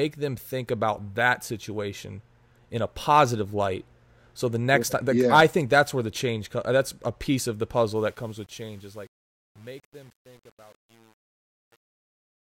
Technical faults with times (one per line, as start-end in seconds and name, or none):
7.96-12.41 truncation distortion on a fade